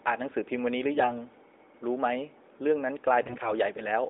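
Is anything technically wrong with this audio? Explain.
Yes. From 3.20 to 3.53 s the speech shows AMR bit errors. The audio has passed through the AMR narrowband mobile codec, with a band of about 300 Hz to 3.7 kHz and light coding texture consistent with the 12.2 kbps mode. In this burst, a weak link flipped roughly 7 percent of the less protected frame bits while the checksum still passed. Pulse positions and the finer pitch, gain and spectral values decoded wrongly, so the level and pitch hold roughly steady while the sound turns hoarse, scratchy and gargly.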